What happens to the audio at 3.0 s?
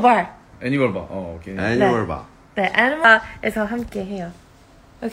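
At 3.04 s the compressed stream carries damaged data: a stretch of its bytes is corrupt, so the decoder can't read the frame there as valid audio. It misinterprets or discards that frame, loses its place in the stream and has to hunt for the next clean frame header before it can continue. What reaches the ear is a single brief glitch, a short chirp, squawk or blip where the corrupted frame falls.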